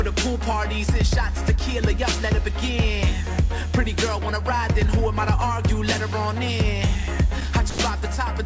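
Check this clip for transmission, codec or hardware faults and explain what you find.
One transmission fault stands out, heard over a call path whose G.722 coding at 64 kbps leaves nothing above 8 kHz. Sound dropped by the voice detector, 7.70 to 7.78 s: 80 ms of sound gives way to steady comfort noise, likely because the sender's detector mistook it for background and paused transmission.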